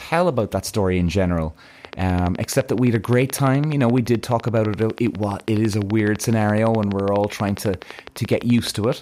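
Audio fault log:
1.85–8.93 s: train of clicks, evenly spaced near 12 per second, about 100 in all, likely from interference; steady identical ticks, unlike random crackle, persisting through speech pauses.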